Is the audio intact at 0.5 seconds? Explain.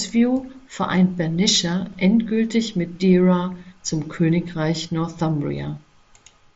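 Yes, at 0.5 seconds the speech is intact, carried through the Bluetooth mSBC headset path with nothing heard above about 7.7 kHz.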